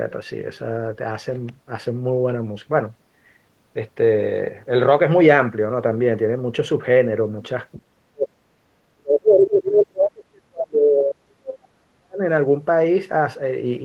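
From 7.77 to 8.4 s, and again from 8.93 to 12.22 s, the speech sinks abruptly, at its deepest by around 40 dB, so parts nearly vanish: about half a second in the first stretch and roughly three seconds in the second. This is speech suppressed in double talk, likely from an echo canceller that heard both ends talking at once, could not tell the local talker from loudspeaker echo, and clamped everything down.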